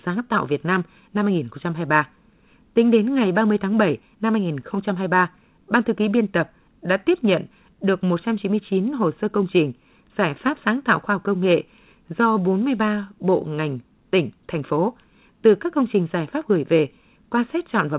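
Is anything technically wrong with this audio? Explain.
No, nothing technically wrong can be heard here.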